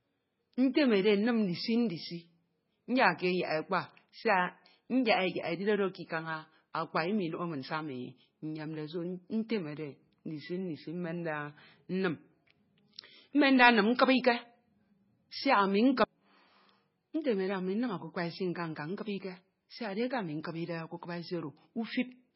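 From start to end the speech has nothing above 5.6 kHz and a watery, swirling texture, likely from heavy MP3 compression at a bitrate near 16 kbps. Unlike a plain low-pass filter, weak frequency lines flicker on and off between frames, leaving chirpy s sounds and smeared onsets.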